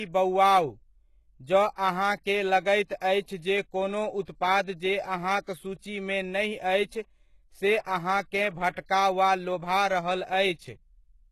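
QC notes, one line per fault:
Throughout: HE-AAC compression, likely the cause of the thin, synthetic top end. The speech is heavily coded, with nothing above 12.3 kHz, and the damage points to a very low bitrate of around 16 kbps. Only the lower spectrum carries real detail. The treble is rebuilt from copied lower bands under a coarse envelope, so its harmonics fail to line up with those below the crossover. That makes s sounds gritty and metallic rather than crisp.
8.86–8.89 s: pre-echo, between "नहि अछि से अहाँकेँ" and "वा लोभा रहल". A short hiss, about 30 ms long, leads into a sharp onset. The transform spreads its quantisation noise across the whole block, so noise sized for the loud attack also fills the quiet gap just before it. The onset loses its edge and comes across softened and smeared, with the hiss arriving slightly ahead of the sound it belongs to.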